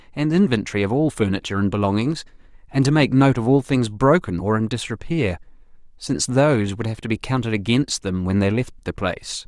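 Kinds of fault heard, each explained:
No technical faults heard.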